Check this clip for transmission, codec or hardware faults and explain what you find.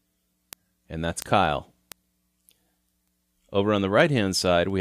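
One fault is present: word clock ticks. From 0.30 s to 4.70 s, a receiving device running on its own clock, drifting by around 100 ppm against the sender, slips one sample at each crossing. That yields about twenty ticks, one roughly every 0.2 s.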